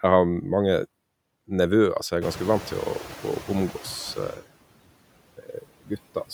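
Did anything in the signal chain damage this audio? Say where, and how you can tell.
Yes. Noise suppressor artifacts run through the whole clip, from the call-processing stage. The background is pulled down by about 21 dB, sinking in pauses and swelling under the speech, because the suppressor re-decides frame by frame which bands count as noise.

Noise suppressor catching up, 2.21 to 3.81 s: the room noise jumps about 18 dB near 2 s, and the suppressor's estimate lags. At first it removes only about 6 dB, then the noise settles lower over roughly 1.6 s as the estimate adapts.

Speech cut by the noise suppressor, 5.37 to 5.98 s: the suppressor mistook parts of the speech for background and turned them down by as much as about 21 dB. About a third of a second in total sounds swallowed or faint, in the same call-processing stage.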